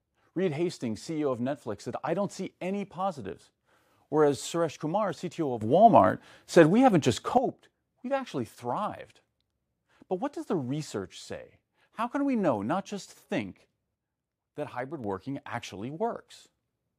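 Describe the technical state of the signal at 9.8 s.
At 9.8 s the speech signal is intact, with no dropout, distortion, or other technical fault audible at that moment.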